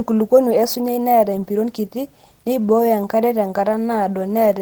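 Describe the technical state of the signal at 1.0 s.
At 1.0 s the speech has a plainly audible coded roughness, a slightly hoarse, synthetic grain, even though content still reaches about 20.3 kHz. This is Opus voice compression, present across the whole clip. The codec appears to be in hybrid mode, with a linear-prediction coder handling the band below 8 kHz and a transform layer covering the top. That fits a low rate around 16 kbps, where the excitation is coded too coarsely to sound natural.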